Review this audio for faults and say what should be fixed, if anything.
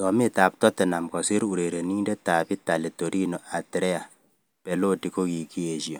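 Nothing needs fixing, since no technical faults turn up anywhere in the signal.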